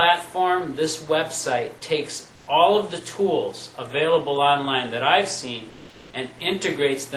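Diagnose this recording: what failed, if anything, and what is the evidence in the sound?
Twice the background goes flat and featureless, from 2.35 to 2.47 s and from 5.69 to 6.13 s, the second also shifting by about 2 dB. This is comfort noise in place of the background, likely from the codec's discontinuous transmission: the sender pauses during quiet stretches and the receiver synthesises matching noise.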